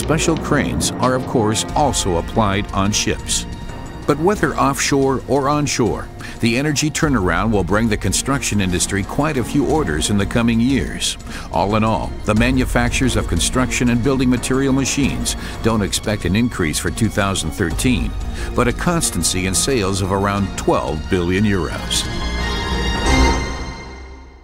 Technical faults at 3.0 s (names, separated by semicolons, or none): none